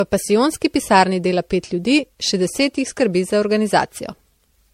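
Speech with generation loss throughout: swirly, hollow, with blurred attacks, and a spectrogram shows patchy holes under a 16.5 kHz ceiling, likely from around seven MP3 re-encodes.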